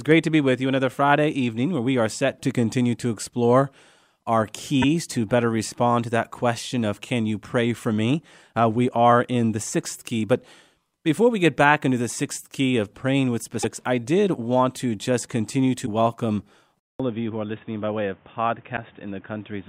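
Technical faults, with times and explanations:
4.81–4.84 s, 13.62–13.65 s, 15.85–15.88 s and 18.76–18.78 s: broken MP3 bit reservoir. Each disturbance lasts about one 24 ms frame, and the sound jumps ahead, likely because frames were cut and the following frame read borrowed bytes from the wrong data, producing a chirp, noise burst or brief hole. Unlike a plain dropout, playback skips forward rather than resuming where it left off.
16.80 s to the end: input switched to a poorer device. A 200 ms silence comes first, and after it nothing is heard above 3.7 kHz. The level drops by about 5 dB, and a new noise floor appears roughly 30 dB below the speech. This is likely a change to another microphone or a headset call profile. A filter or EQ change would not bring the gap, the level step and the new background noise together.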